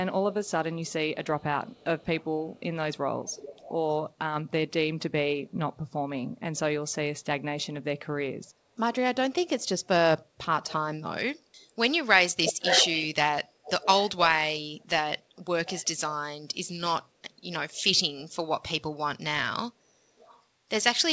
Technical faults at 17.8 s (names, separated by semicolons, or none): pre-emphasis left on; echo leak